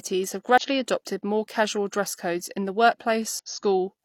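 Damaged data in a compressed stream at 0.58 to 0.62 s, just before "adopted more casual dress", and again at 3.39 s: corrupted frames throw the decoder off sync, producing brief glitches.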